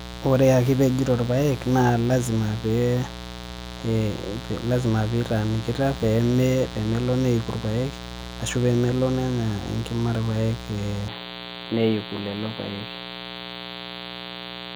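A grounding or shielding problem lets the switching spikes of a rectifier or dimmer into the signal path twice per cycle of the 60 Hz mains, so a mains buzz runs under the whole recording. Because those spikes are sharp, the interference carries a long ladder of 60 Hz harmonics climbing into the kilohertz range. It sounds like a steady, raspy buzz rather than a soft hum, sitting fairly high, roughly 15 dB below the speech.

At 11.08 s the sound changes abruptly, most likely because the system's input switched to a poorer device partway through. From that point to the end, nothing above 4.6 kHz gets through, so the speech loses its air and sibilant detail and turns dull and boxy. There is no gap at the switch, and the loudness stays about the same. The new device brings a faint noise floor of its own, far below the speech.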